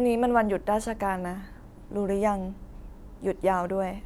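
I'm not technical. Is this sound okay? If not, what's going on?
Yes, there's nothing wrong to report: no technical faults turn up anywhere in this speech recording.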